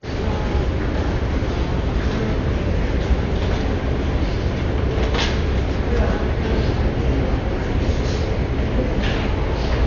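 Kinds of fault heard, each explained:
Dolby Digital compression: The sound is dull, with nothing above about 6.9 kHz, and a rough, fluttering noise clings to tonal parts, which is heavy damage of the kind a likely low-bitrate AC-3 encode, near 48 kbps, produces. The encoder cut the band and starved many frequency lines of bits, and the decoder filled those gaps with dither noise. On a spectrogram there is a hard ceiling at 6.9 kHz and grainy, speckled noise around harmonics, steady across the whole clip.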